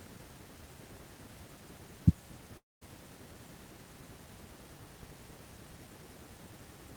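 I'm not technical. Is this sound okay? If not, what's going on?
No. From 2.57 to 2.83 s there's a long network dropout, likely. The speech smears into a fading buzz or hiss, goes silent, then returns with about a quarter second missing.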